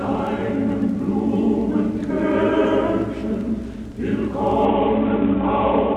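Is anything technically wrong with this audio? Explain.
Yes. From 4.65 s to the end there is a Bluetooth SBC bit pool drop, which fits a bit pool cut from 28 to 5 at around 54 kbps. The starved upper sub-bands vanish and the rest quantise coarsely, so treble dulls and gritty noise rises. A spectrogram shows the top bands emptying abruptly, with grainy speckle below.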